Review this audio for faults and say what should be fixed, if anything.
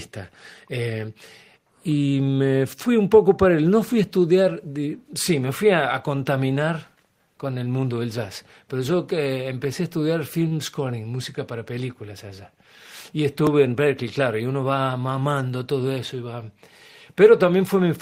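A short stall from a late packet at 10.47 to 10.53 s: the jitter buffer ran dry, so 38 ms of the last sound was stretched, showing as repeated waveform cycles and flat, smeared spectrogram bands. Prevent it with a slightly deeper jitter buffer target.

A jitter buffer speed-up from 13.65 to 14.03 s: pitch-period chunks were cut to drain backlog, about 40 ms in total, giving 108% speed at unchanged pitch. On a spectrogram, events crowd closer with harmonic spacing intact. Prevent it by smoothing network delivery so packets don't arrive bunched.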